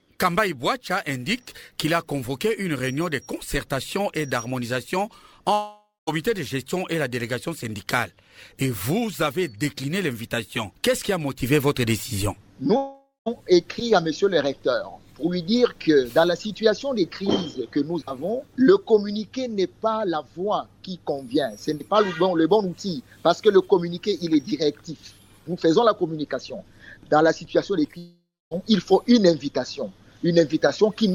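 At 5.53 to 6.09, 12.77 to 13.28 and 27.98 to 28.59 s the sound smears into a fading buzz, drops to silence, then resumes with about half a second missing. That's likely a long network dropout each time, with the receiver concealing the gap.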